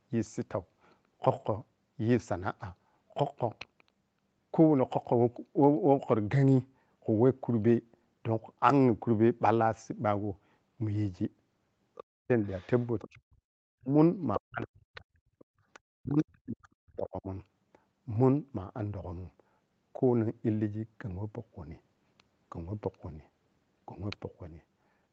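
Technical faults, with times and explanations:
11.95–13.09 s and 14.34–16.23 s, other side's voice leaking through: a faint second voice sits under the speech, about 20 dB down and then about 15 dB down, likely echo from a loudspeaker that the echo canceller left in. On a spectrogram, a fainter, separate harmonic pattern overlaps the main one.
12.05–12.3 s, 13.09–15.16 s and 15.9–17.29 s, speech suppressed in double talk: the speech drops sharply, as much as about 40 dB, for roughly a third of a second, then about a second, then about a second and a half. The echo canceller likely turned this talker down along with the loudspeaker echo. The waveform shows hollow gaps, and the spectrogram shows the harmonics thinning or vanishing below the 8 kHz ceiling of the call band.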